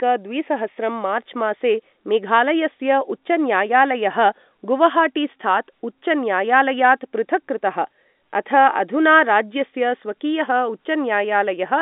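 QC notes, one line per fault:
None; there is no fault to log for this clip.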